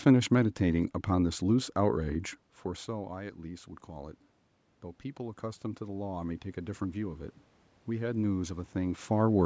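From 5.17 to 7.3 s, voice and room noise swell together by about 4 dB: automatic gain rising, as the control answers an input that dropped about 15 dB.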